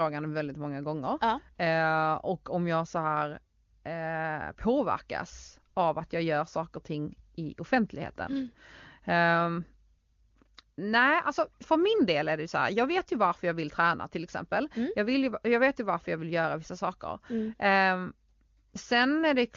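No technical faults are present: the speech carries the roughly 7 kHz bandwidth of AMR wideband (HD Voice) coding with at most faint codec damage, which fits the codec's top 23.85 kbit/s mode.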